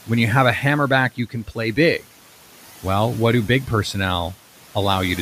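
Speech cut by the noise suppressor at 1.16 to 1.58 s, after "you have a hammerback": mistaking soft speech for noise, it turned it down about 12 dB, so it sounds swallowed.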